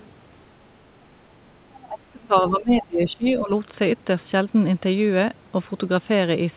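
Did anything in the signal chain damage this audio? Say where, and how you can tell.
Yes. Between 1.88 and 3.51 s the speech dips, up to about 20 dB, for roughly a second in patches, likely speech suppressed in double talk by the call's echo canceller.

From 3.08 to 3.3 s a faint second voice, about 30 dB below the speech, sits underneath, likely the other side's voice leaking through past the echo canceller. It is not crosstalk, since it coincides with the suppression.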